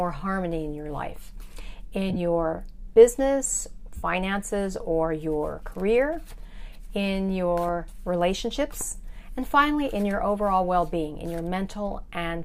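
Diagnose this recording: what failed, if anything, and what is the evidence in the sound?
The failure is at the codec and wireless link stage: lost LE Audio frames. At 2.10–2.16 s, about 30 ms of audio drops out in short runs of roughly 15 ms spread over 60 ms. At 3.97–4.03 s, a continuous 60 ms gap follows. The gap sizes fit 7.5 ms LC3 frames. In each gap the LC3 decoder repeats the last good spectrum with randomised signs and fades it, so tonal content turns into a brief noisy smear.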